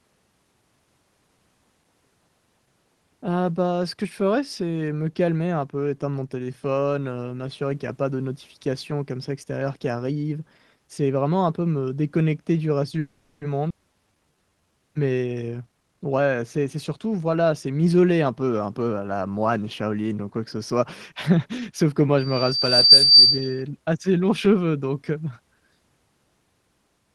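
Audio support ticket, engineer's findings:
Call audio freeze, 12.99–13.44 s, right after "me déconnecter du reste". About 420 ms of fading buzz stretching the last sound, then speech resumes where it stopped. Likely packet delay draining the jitter buffer. Unlike a skip, nothing is lost, only a gap inserted.

Skip ahead, 13.69–13.73 s. Abrupt jump, only a ~10 ms join, with roughly 150 ms of speech missing. Jitter buffer or network discarding a late stretch while newer audio waited. Distinct from the freeze: no filler sound, content actually gone.

Jitter buffer slow-down, 13.93–14.80 s. Speech drawn out to 82% speed, 166 ms added, pitch unchanged. Buffer refilling its reserve by repeating pitch periods. Not a freeze: continuous stretched speech, no fading buzz.

Jitter buffer speed-up, 15.52–17.67 s, ending just before "m'isoler un peu un". Hurried speech at 120% speed, pitch intact, roughly 400 ms trimmed. 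Buffer shedding excess delay by cutting pitch periods. Unlike a skip, removal is spread out in small pieces, not one jump.

Loudspeaker feedback squeal, 22.18–23.63 s, between "que moi" and "assez longs cheveux donc". Single 4.7 kHz tone swelling over about 0.7 s to about 10 dB above speech. Acoustic loop, mic hearing its own loudspeaker. Unlike codec artefacts, one steady pitch rising in level, unaffected by the 12 kHz Opus band limit.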